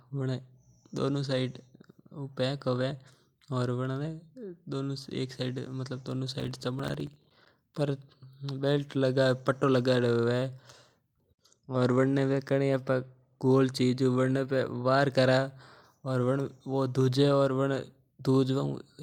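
Speech with processor overload crackle from 6.40 to 7.54 s: dozens of missed deadlines on buffers of roughly 5 ms leave silent gaps, which show as broadband vertical streaks on a spectrogram and flat notches in the waveform.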